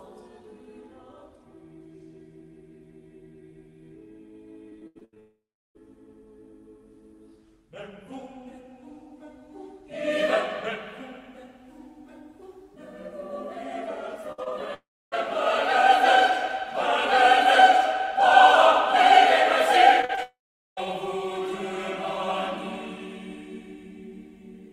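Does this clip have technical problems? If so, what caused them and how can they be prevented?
Yes. Repeated packet loss (robotic sound) occurs at 4.69–5.79 s (seven gaps, longest 81 ms), 14.32–14.67 s (three gaps, longest 56 ms, with 42% of that stretch patched) and 20.02–20.81 s (five gaps, longest 40 ms). Each short hole is bridged by stretching the previous sound, so the audio turns choppy while still moving forward. Unlike a dropout, it never falls silent. A larger adaptive jitter buffer and forward error correction would prevent it.

Three long network dropouts also occur, at 5.20–5.81 s, 14.74–15.14 s and 20.23–20.86 s. In each, the last sound smears into a fading buzz. Then comes silence of about 0.36 s, 0.29 s and 0.42 s, and the audio resumes with roughly 0.4 to 0.56 s missing. The likely cause is a brief total network outage. This differs from packet loss because the gap ends in a real silence rather than in choppy continuation. 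A more stable connection, such as wired rather than congested wireless, would prevent it.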